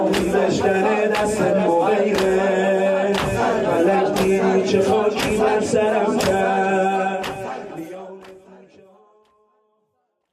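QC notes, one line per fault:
Nothing stood out on listening, and the ending simply eases away in a smooth fade-out from around 7 s to 10.3 s.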